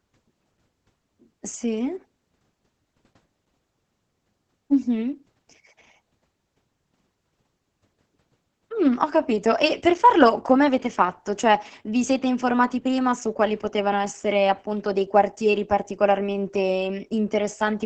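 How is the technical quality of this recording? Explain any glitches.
The quality is poor. Heavy Opus voice compression affects the whole speech clip. The speech sounds muffled, hoarse and a little robotic. The coder squeezes speech into wideband SILK linear prediction. Its excitation is coarsely coded, which fits a bitrate near 10 kbps.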